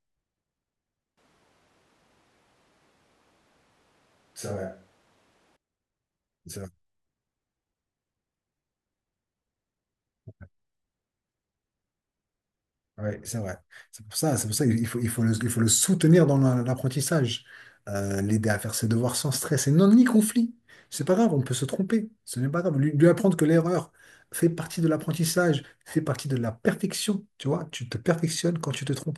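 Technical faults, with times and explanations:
1.18–5.56 s, switch to a distant microphone: speech abruptly turns roomy and hollow, bass thinner, room noise around 30 dB down, level steady; likely a distant microphone replacing the close one.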